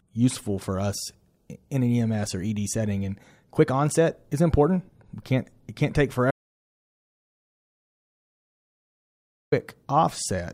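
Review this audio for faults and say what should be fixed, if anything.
Audio dropout to silence from 6.31 to 9.52 s. The speech cuts out completely, no room tone, for 3.2 s. Likely a lost input feeding zeros. Secure connections and monitor input levels during recording.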